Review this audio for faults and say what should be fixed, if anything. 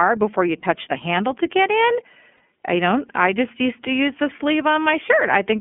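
The whole speech clip runs through the iLBC codec. Everything sits in a narrow 200 Hz to 3.4 kHz band, and the coding roughness is plainly audible: slightly synthetic, rough speech, which fits iLBC's 13.33 kbps mode with 30 ms frames. To avoid it, negotiate a wideband codec like Opus or G.722 end to end.

There are two spots with lost iLBC frames, at 0.60 s and 2.37 s, each a single 30 ms gap. The decoder fills each one by repeating the last pitch cycle with some noise, so you hear a brief held, buzzy vowel before the voice snaps back. To fix it, add jitter buffering and FEC or redundancy on the network path.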